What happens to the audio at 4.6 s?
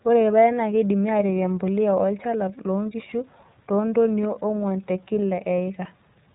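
The speech at 4.6 s has passed through the iLBC codec, which encodes each 30 ms frame on its own. That cuts everything above 4 kHz and leaves the speech audibly rough and synthetic, consistent with iLBC's 13.33 kbps mode.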